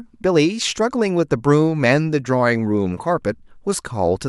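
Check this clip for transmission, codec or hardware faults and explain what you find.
No faults found in this clip.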